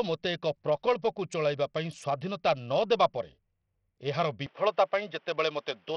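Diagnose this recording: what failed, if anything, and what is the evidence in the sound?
Codec stage: likely heavy Bluetooth SBC compression starves the upper sub-bands, so the speech's treble flickers and carries grit throughout, fitting a bitrate around 64 kbps.

Driver stage: at 4.46 s the input likely switched to a poorer device. The speech then turns dull with nothing above 3.8 kHz, shifts about 5 dB in level, and gains faint noise.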